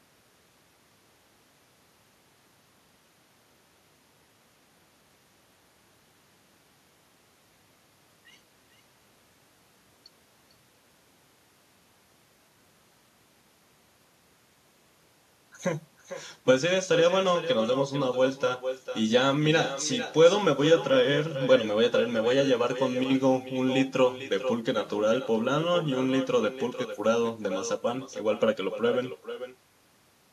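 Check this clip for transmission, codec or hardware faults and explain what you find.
One fault runs through the whole recording: echo with no canceller. Every phrase of speech returns about half a second later as a quieter, thinner copy, roughly 10 dB down. The far end's loudspeaker output reaches its microphone and is sent back unremoved.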